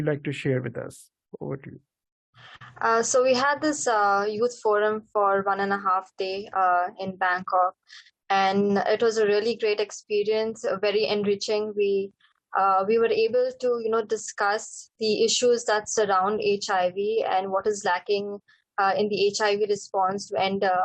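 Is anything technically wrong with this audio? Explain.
Yes, there are two. A short stall from a late packet at 2.56 to 2.62 s: the jitter buffer ran dry, so the receiver stretched the last sound by 42 ms, leaving a brief held tone. A jitter buffer speed-up from 7.77 to 8.28 s: the receiver repeatedly cut pitch-period slices, about 40 ms in all, so the sound runs at 106% speed, hurried but unchanged in pitch.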